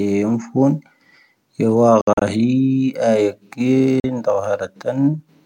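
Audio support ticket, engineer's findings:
Bluetooth dropout, two events. 2.01 to 2.22 s: speech breaks into several silent gaps, about 120 ms lost, longest 61 ms, consistent with around six missed packets. 4.00 to 4.04 s: one 40 ms hole. Likely cause: late packets to headphones.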